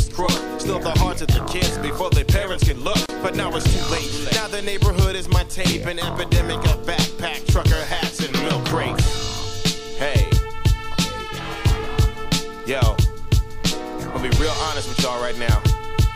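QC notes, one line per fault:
3.06–3.09 s: gap at a join of encoded pieces. A 32 ms gap opens in the sound, its edges smeared by the codec, left by encoder delay and padding kept where separately encoded pieces meet.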